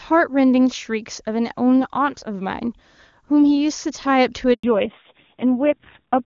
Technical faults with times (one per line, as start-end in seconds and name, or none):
4.53-4.63 handover gap
4.63-6.25 fallback to narrowband